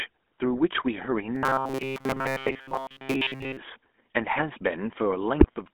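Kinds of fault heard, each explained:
GSM full-rate codec: The sound carries the gravelly, buzzy roughness of the original GSM speech coder throughout. It models the vocal tract and feeds it a coarse, regularly spaced pulse excitation, which fits its 13 kbps rate. Fine detail in the excitation is lost, so the speech sounds grainy and harsh. The band is narrow, running from about 250 Hz to 3.5 kHz. Low warmth and upper brightness are missing, and the damage is plainly audible.
Robotic sound from repeated short buffers: From 1.35 to 3.57 s the speech turns into a stiff, metallic drone. A steady buzz near 133 Hz sits over it, and the speech still follows its rough shape. A repeat period of about 7.5 ms would give exactly that fixed pitch. The likely cause is audio arriving too rarely, with the player looping each short buffer to fill the gaps. Most of the real audio in that span seems to be skipped.
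GSM bit errors: Near the very end, from 5.40 to 5.48 s, the speech breaks into a short squawk with gargling distortion. Corrupted bits in the GSM stream reach the decoder there. Bad filter, pitch or gain values bend the spectrum and jolt the level. The burst lasts about 80 ms, which fits roughly three damaged codec frames. The error rate behind it fits about 3.4 percent of bits flipped.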